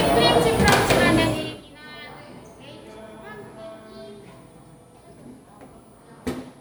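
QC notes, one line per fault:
Throughout: switching supply whistle, a thin high tone around 10 kHz, roughly 20 dB under the sound, wandering between about 9.03 and 10.1 kHz. A converter running in audible burst mode shifts frequency with load, so unlike a steady pilot or CRT tone, its pitch drifts.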